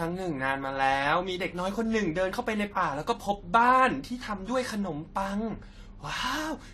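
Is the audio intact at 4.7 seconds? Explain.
No, at 4.7 seconds, as throughout, the speech shows transcoding between lossy codecs, likely a low-rate Vorbis encode re-encoded as AAC-LC. The second codec spends bits on the first's artefacts and adds its own, and nothing is left above 13.9 kHz.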